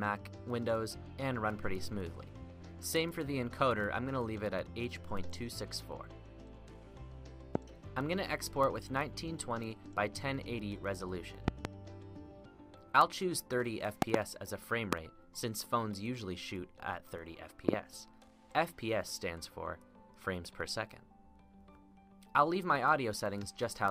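A loud pop first hits at 7.55 to 7.58 s. A single sharp pulse jumps about 20 dB above the sound. More follow: a double pop at 11.48 to 11.67 s, another double at 14.02 to 14.17 s, a single at 14.93 to 14.95 s, and a double at 17.69 to 17.76 s. The last three peak higher, around 25 dB. Each is a brief voltage spike, likely from a plug, switch or static discharge. The sound carries on underneath.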